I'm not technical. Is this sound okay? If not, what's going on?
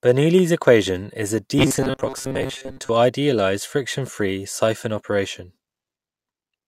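No. From 1.59 to 2.90 s, right after "equation is a", there is robotic sound from repeated short buffers: the speech becomes a stiff, metallic buzz pitched at 133 Hz that only loosely tracks the words. This likely happens because fresh audio arrives too slowly, so the playback keeps looping a tiny slice of about 7.5 ms to fill the gaps. Most of the real speech in that stretch is skipped, and the rapid looping creates the fixed buzzing pitch.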